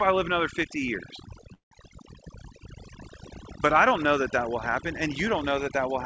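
Throughout, the speech sits over a near-silent, twinkling background: overdone noise removal, cutting frequency bands near its noise estimate and taking quieter parts of the voice with them.

From 1.54 to 1.73 s, the last sound stretches into a fading buzz, then about 0.12 s of silence before speech resumes intact. This is likely a call audio freeze: delayed packets emptied the jitter buffer, inserting roughly 0.17 s of gap. The band limit near 8 kHz fits the G.722 call path.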